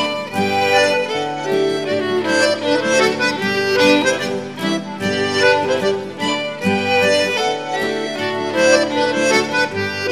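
From about 4.79 to 7.02 s the audio shows channel delay (comb filtering): one channel lags by roughly a single sample, so summing to mono cancels near 20 kHz and gently dulls the top end.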